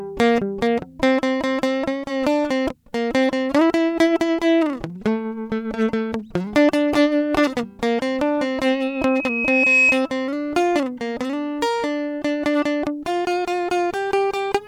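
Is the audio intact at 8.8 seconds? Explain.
No. At 8.8 seconds a loudspeaker feedback squeal is under way, running from 8.71 to 10.06 s. A microphone is picking up its own speaker. The loop gain exceeds one at 2.5 kHz. That tone swells over about a second to roughly 5 dB above the music.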